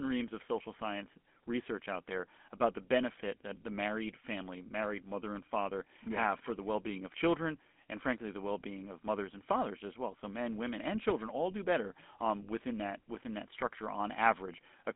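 Throughout, GSM full-rate coding adds a buzzy, gravelly roughness, which fits a 13 kbps pulse-excited coder. The band runs roughly 200 Hz to 3.5 kHz, with nothing above 3.8 kHz.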